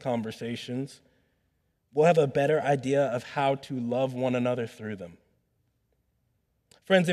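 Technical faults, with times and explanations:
There are no technical faults in this speech recording.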